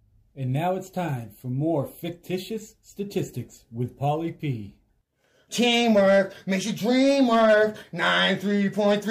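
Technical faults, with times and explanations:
5.63–6.19 s and 6.91–7.64 s: hard clipping, peaks driven about 4 and 5 dB past full scale and cut flat, adding high harmonics heard as crackle on peaks.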